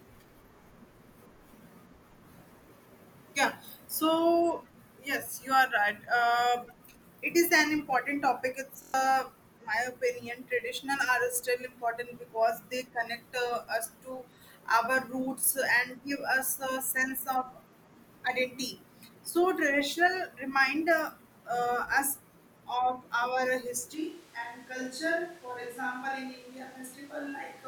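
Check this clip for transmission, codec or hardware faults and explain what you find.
Two faults are audible in this speech clip.

From 8.82 to 8.94 s there is a system hang loop. The driver stalled while the hardware kept replaying one 23.2 ms buffer, which fits a 1024-sample buffer. It repeats five times at 43.1 Hz. It sounds like a brief buzz, and about a tenth of a second of audio is lost.

At 23.95 s the speech suddenly turns roomy and hollow, with thinner bass. The level drops by about 5 dB. Room noise rises to about 20 dB below the speech. This persists to the end. The likely cause is a switch to a distant microphone after the close one dropped out.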